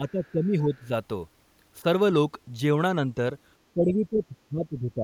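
Speech whose level dips and thins in patches from 0.0 to 0.92 s and again from 3.74 s to the end, by roughly 15 dB early and around 20 dB late. This is speech suppressed in double talk, likely an echo canceller turning the talker down while the far side was also speaking. Between 0.26 and 0.31 s a faint scrap of another voice surfaces, far below the talker. That is the other side's voice leaking through, likely loudspeaker sound the canceller failed to remove from the microphone.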